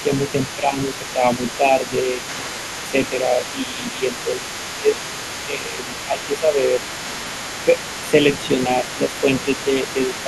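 Throughout, one channel arrives a fraction of a millisecond late, roughly 0.3 ms, and the two are summed to mono. That channel delay causes comb filtering, cancelling shared content at evenly spaced frequencies from around 1.5 kHz upward, so the speech sounds hollow and phasey.

From the very start to the end, an echo canceller likely failed to remove the far end's loudspeaker sound from the microphone. The other side's voice leaking through sits about 15 dB below the speech.

In four stretches, the canceller likely could not separate the talker from the loudspeaker echo while both spoke, and turned everything down. This is speech suppressed in double talk. From 0.03 to 4.92 s the talker's level dips by up to about 15 dB, then by up to about 10 dB from 5.46 to 6.82 s. Shallower dips of about 5 dB follow from 7.65 to 8.14 s and from 8.67 s to the end.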